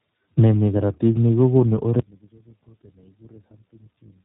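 Speech with tandem speech coding throughout: iLBC recodes AMR-NB's already degraded output, giving rough, warbly sound and a spectrogram empty above 3.8 kHz.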